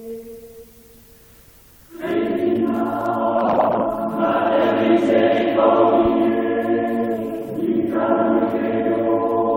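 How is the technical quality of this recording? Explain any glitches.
No glitches are audible in this recording; the signal holds steady throughout with nothing to flag.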